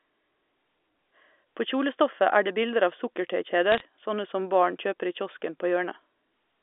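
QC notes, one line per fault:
3.71–3.81 s, bit errors on a digital phone line: flipped bits corrupt single samples, giving a brief burst of sharp ticks just before "sånne som barn kjøper," visible as isolated waveform spikes and thin vertical spectrogram lines.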